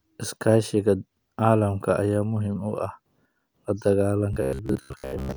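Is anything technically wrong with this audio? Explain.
Yes. From 4.33 to 5.37 s, robotic sound from repeated short buffers appears. The speech becomes a metallic buzz near 66.8 Hz, likely from repeating about 15 ms buffers while most new audio is skipped.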